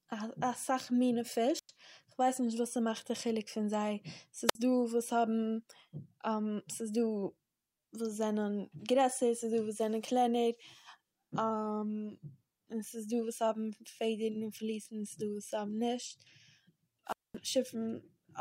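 Wireless microphone squelch dropouts occur at 1.56 to 1.69 s, 4.47 to 4.55 s and 17.06 to 17.37 s. The radio signal fades, hiss rises briefly, then the receiver's squelch mutes the speech. The muted gaps last about 98 ms, 57 ms and 221 ms.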